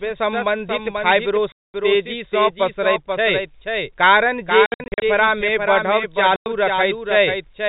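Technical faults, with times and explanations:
Throughout, doubled audio track: a full-band copy of the speech trails about half a second behind, roughly 5 dB down, with no room colour, likely a second capture path or misaligned edit.
1.52 to 1.74 s, packet loss filled with silence: a 220 ms hole with hard edges, the length of several lost 20 ms packets in a row.
4.66 to 5.02 s, packet loss filled with silence: right after "कारण जे", 240 ms goes missing in short gaps scattered over 360 ms, the longest 60 ms.
6.36 to 6.46 s, packet loss filled with silence: a 100 ms dropout, again sharp-edged, where the receiver played silence for the missing packets.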